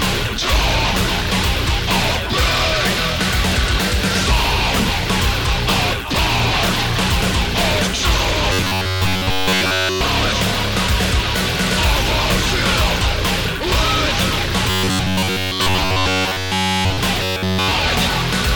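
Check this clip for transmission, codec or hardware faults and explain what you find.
Two kinds of fault are present: a robotic buzz from repeated short buffers, and a very brief block of digital silence inside the first buzzy stretch.

Robotic sound from repeated short buffers, 8.53 to 10.01 s, 14.70 to 16.98 s and 17.23 to 17.71 s: most of the audio, all of it in the last stretch, is likely replaced by a looped segment of about 10.7 ms. This imposes a fixed 93.8 Hz metallic buzz. Unlike a gap, the repeats fill the time instead of dropping out.

Block of digital silence, 9.13 s: a 0.73 ms drop to silence, which fits a 32-sample block, is heard as a tick or dip rather than a hole, with no steady pitch.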